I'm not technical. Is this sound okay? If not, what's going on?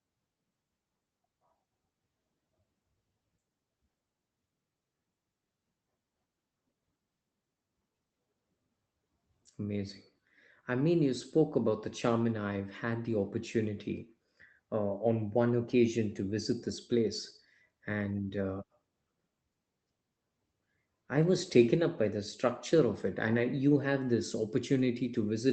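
Yes, nothing is wrong here; it's ordinary speech carried over a normal internet call, with the slightly muffled top end such calls usually have.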